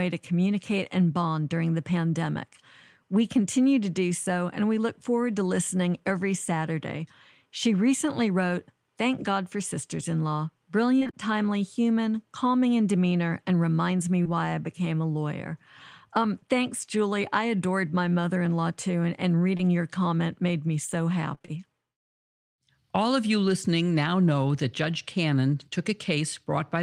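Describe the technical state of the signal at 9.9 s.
At 9.9 s the speech signal is intact, with no audible fault at that moment.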